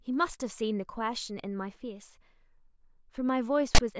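Near the end of this speech clip, from 3.75 to 3.80 s, the decoder treats a block of file tags as sample data, so the file tags are played as audio. The tag text, read as numbers, produces a loud, gritty rasp with its waveform pushed off-centre to one side, and the zero padding that follows drops to dead silence. Together they make a roughly 50 ms burst of static with abrupt, hard edges at both ends.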